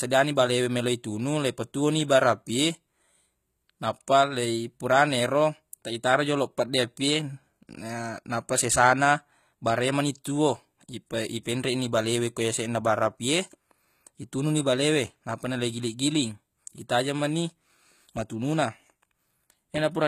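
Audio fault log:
throughout: Likely HE-AAC compression. Treble is rebuilt from copied lower bands, so s sounds turn gritty and metallic. Nothing above 14.9 kHz, fitting about 20 kbps.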